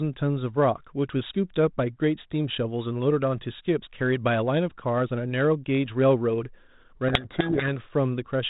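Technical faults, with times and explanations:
7.08 to 7.69 s, codec payload misread: The speech is suddenly buried in harsh, gritty distortion for about 0.6 s. The audio runs through G.726 ADPCM at 32 kbit/s, and here the decoder reads each code word with its bits in the wrong order. Each sample's difference value is therefore wrong. The adaptive predictor is pushed off course, so errors pile up into rasping noise over the speech. Clean decoding returns at 7.69 s, when both ends agree on the bit order again.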